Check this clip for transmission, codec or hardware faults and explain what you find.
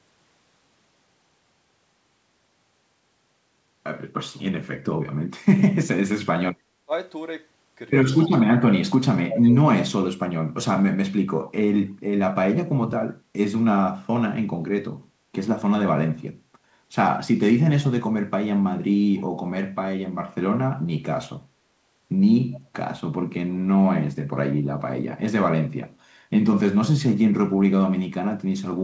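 Two faults are present: speech suppressed in double talk and echo leak. The sound tops out at 8 kHz, which fits a call path running G.722 at 64 kbps. That band limit is expected for the codec and not a fault.

Speech suppressed in double talk occurs at 6.54–6.92 s, 8.39–8.9 s, 9.26–9.57 s and 9.89–9.94 s. The level falls by roughly 20 to 35 dB, deepest in the second event, then recovers. The likely cause is an echo canceller that met simultaneous talk from both ends, could not separate near speech from loudspeaker echo, and attenuated everything.

Echo leak appears as short delayed copies at 8.2–8.29 s, 19.15–19.21 s and 22.52–22.6 s. Each trails the original sound by 273 ms and sits about 20 to 30 dB below it, heard as a faint, brief ghost. This is likely residual echo: one end's echo canceller left part of its loudspeaker signal in the microphone feed, and that remnant was transmitted back.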